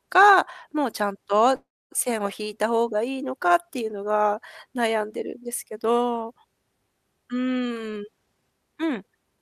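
From 1.55 to 1.93 s a call audio freeze stretches the last sound into a fading buzz or hiss, then about 0.27 s of blank silence, likely from delayed packets emptying the jitter buffer. A spectrogram shows a smeared band dissolving into an empty gap. From 7.62 to 9.38 s a jitter buffer speed-up trims roughly 0.3 s of pitch periods, running speech at 117% with unchanged pitch. A spectrogram shows horizontally compressed, unshifted harmonics.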